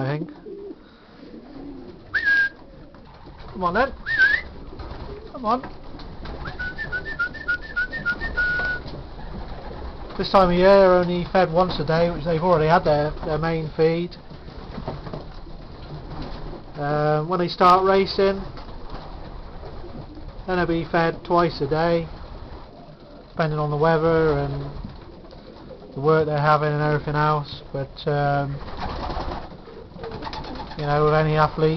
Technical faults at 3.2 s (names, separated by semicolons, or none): none